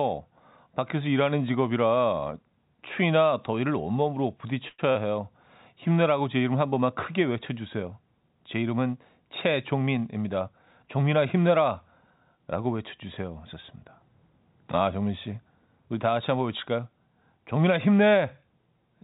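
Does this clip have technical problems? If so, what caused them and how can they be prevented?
Yes. At 4.68 s the sound stops moving forward for about 0.1 s: the last sound is stretched into a fading buzz for about 0.1 s, with a short dip to silence of about 20 ms, and then the audio resumes exactly where it left off. This is a call audio freeze, likely caused by packets arriving late so the jitter buffer ran dry. Unlike packet loss, nothing is skipped. A gap is inserted, and everything after it plays about 0.1 s later. Giving the jitter buffer more headroom, or prioritising the call's traffic on congested links, would prevent it.

Right after, from 4.91 to 4.98 s, comes short concealed packet loss. About 40 ms of real audio never arrived, and the receiver covered the hole with about 36 ms of continued sound before blending back, which gives a brief smear. It differs from the freeze because the original audio there is gone for good rather than delayed, and the timing does not shift. 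Forward error correction or redundant packets, together with a less lossy network path, would prevent it.

From 9.73 to 10.84 s the sound runs at about 109% speed with its pitch unchanged. This is jitter buffer speed-up: the buffer held more audio than it needed, so the receiver trimmed many tiny pitch-period slices, roughly a tenth of a second in total, to catch up. A plain faster playback or resampling would raise the pitch as well, and here it stays the same. Smoother packet delivery avoids the backlog that triggers it.

The call path itself is narrowband, with nothing above 4 kHz, which fits 64 kbps G.711 mu-law.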